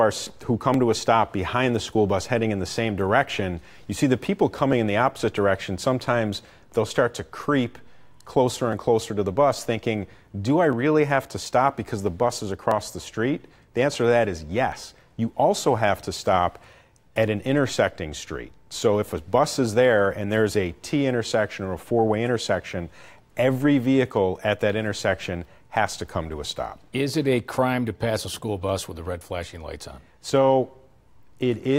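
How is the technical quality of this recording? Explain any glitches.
The recording has one recurring fault. Periodic USB or driver dropouts run from 0.74 s to 30.69 s, every 2.0 s: a periodic bus or driver stall skips about a millisecond of audio around fifteen times, heard as regular ticks.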